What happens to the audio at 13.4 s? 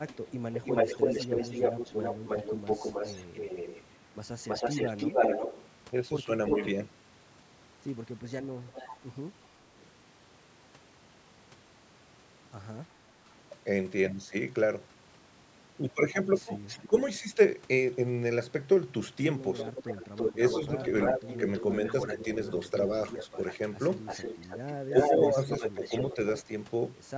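At 13.4 s the speech carries on without any fault, with only the usual band limit of the call's microphone processing, which leaves nothing above 8 kHz.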